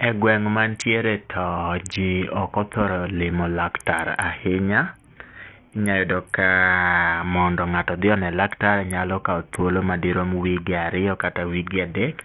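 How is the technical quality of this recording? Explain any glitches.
The technical quality is poor, with heavy coding damage across the whole speech recording. Throughout the clip, what sounds like Bluetooth SBC compression is likely to blame: its few fixed sub-bands are starved of bits, which fits a very low rate around 48 kbps. The top bands lose their treble, which drops out and flickers, while coarse quantisation leaves gritty noise and aliasing over the voice.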